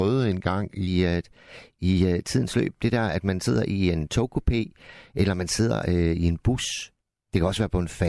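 From 0.88 s to the end, the speech has a wrong sample rate fault. The audio plays back faster than it was captured, with no rate conversion. Speed and pitch rise together. The voice runs about 1.09 times too fast and sits about 1.47 semitones high. It sounds slightly hurried and high. The ratio fits audio recorded at 22 kHz and played at 24 kHz.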